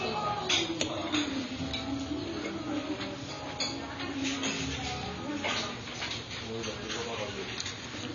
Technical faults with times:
0.00-8.14 AAC compression

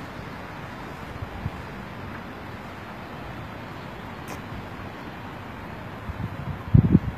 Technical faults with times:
0.00-7.18 HE-AAC compression

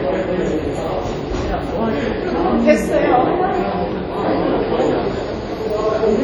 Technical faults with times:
0.00-6.24 WMA compression

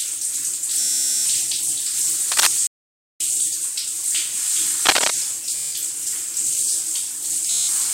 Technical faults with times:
0.80-1.26 Bluetooth stutter
2.31-2.47 cable scratch noise
2.67-3.20 playback stall
4.85-5.10 cable scratch noise
5.56-5.72 Bluetooth stutter
7.51-7.68 Bluetooth stutter

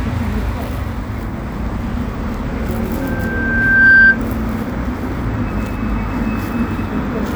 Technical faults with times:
3.01-4.18 loudspeaker feedback squeal

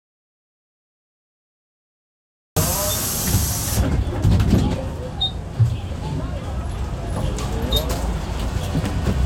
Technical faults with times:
0.00-2.56 audio dropout to silence

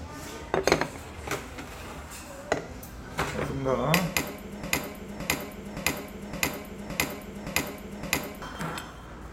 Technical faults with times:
4.63-8.42 broken-record loop

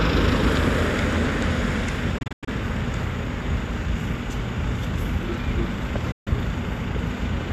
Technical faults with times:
2.18-2.48 digital broadcast dropout
6.11-6.27 digital broadcast dropout

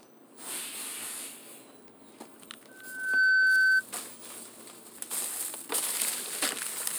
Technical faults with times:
2.68-3.84 loudspeaker feedback squeal

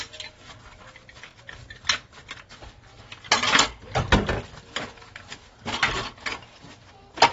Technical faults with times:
0.00-7.32 AAC compression
1.31-1.33 overlapping chunks
4.33-4.35 overlapping chunks

